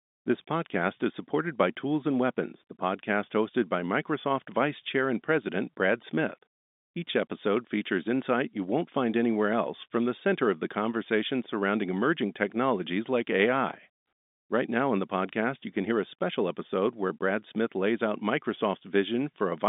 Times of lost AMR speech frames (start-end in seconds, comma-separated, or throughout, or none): none